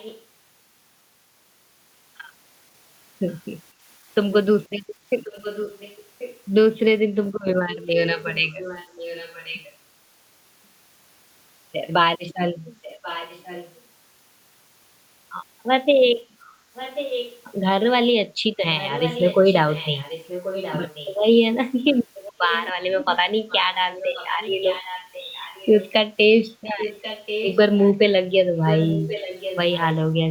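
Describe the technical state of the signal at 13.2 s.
At 13.2 s you're in an echo leak running from 12.82 to 13.81 s: a delayed copy of the speech, roughly 15 dB down, trails about 1.09 s behind. That's likely a far-end loudspeaker whose echo canceller didn't fully suppress its mic pickup.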